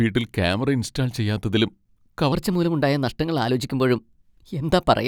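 Likely played back against the wrong clock, the speech from 2.32 s to the end runs 1.17 times too fast as a section at the wrong speed, pitched about three semitones higher and hurried.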